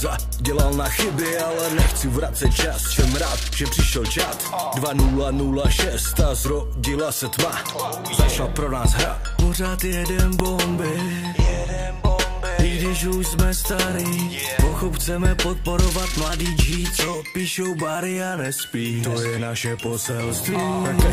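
A single very loud bang at 10.40 s comes from invalid numbers at full scale: a calculation produced infinite or invalid values that were forced to maximum level for under a millisecond, which fits a 32-sample block. A block this short collapses into one bang rather than two pops with silence between.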